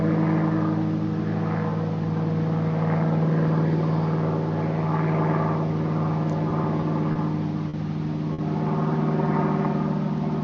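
Everyday sounds make up the recording, and between 6.49 and 7.18 s they break into repeated stalls (stutter). Packets arrived late, so the jitter buffer ran dry four times. Each time the receiver prolonged the last sound to fill the wait, about 60 ms in total, around 9% of that stretch, with the longest hold near 30 ms. Nothing is lost, but the sound drags and hiccups. On a spectrogram these show as brief smeared bands where the texture freezes, and the waveform shows short repeated, slightly fading segments. Two more short stalls from a late packet follow, at 7.69 to 7.76 s and 8.33 to 8.41 s. Here a single packet missed its slot as the delay jumped by about 40 ms and then 50 ms, and the receiver held the last sound for that long before resuming where it left off. Each is heard as one sound hanging on slightly too long, with a faint buzz or dip. A spectrogram shows a narrow vertical strip of frozen, horizontally streaked content, and the waveform shows a short repeated or sagging stretch.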